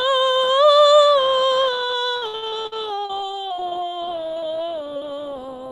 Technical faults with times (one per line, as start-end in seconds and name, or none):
2.17-4.44 repeated packet loss (robotic sound)
4.31-4.74 jitter buffer slow-down
4.94-5.71 scattered short gaps